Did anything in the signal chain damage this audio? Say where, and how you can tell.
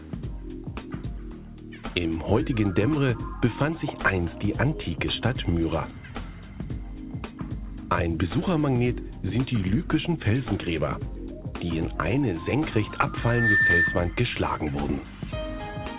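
Yes. At the playback stage, a loudspeaker fed back into its own microphone and produced loudspeaker feedback squeal from 13.16 to 14.17 s. At 1.8 kHz the loop gain passed one, so a single tone swells over about a third of a second to roughly 5 dB above the audio.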